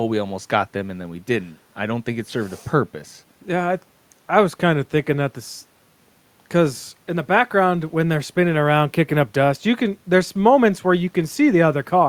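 Listening closely to the speech, nothing stood out as a technical fault at any point.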